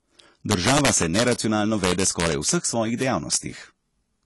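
From start to finish the speech sounds like it has passed through a lossy codec, likely AAC compression at a low bitrate, consistent with AAC-LC at around 32 kbps. Nothing is left above 11.5 kHz, so the top end is cut away and the speech sounds dull. The damage is plainly audible: consonants smear, and sibilants and held sounds take on a fizzy, warbling grain where the coder has thinned out the spectrum.

Three stretches show integer overflow, where the signal was pushed past the largest value the number format can hold and wrapped around to the opposite sign instead of being limited. The first, from 0.51 to 1.33 s, is the worst, driven about 5 dB over the limit. The second, 1.84 to 2.49 s, and the third, 3.02 to 3.35 s, are each about 2 dB over. On every peak above the ceiling the waveform jumps across its full range, producing violent, sharp cracks far harsher than ordinary clipping. 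The damage is densest in the first stretch.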